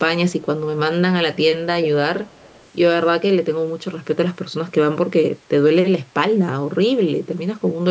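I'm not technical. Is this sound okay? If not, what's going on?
No. There's an echo leak: at 1.82 s a brief, fairly noticeable copy of the speech pops up, then from 2.24 to 2.69 s a much fainter one, both about a third of a second late. Likely a speakerphone whose echo canceller missed some.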